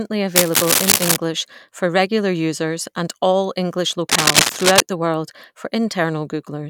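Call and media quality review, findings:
Cable scratch noise, 0.35–1.17 s, ending just before "for regular users and". Dense, uneven scratching over the speech, a few dB louder than it. Likely a worn cable, connector or control being moved. Contact resistance jumps rapidly and injects irregular noise bursts. Recurs at 4.09–4.81 s, just before "the world for", with the same rustling character and similar level. Check the mic lead and its connectors.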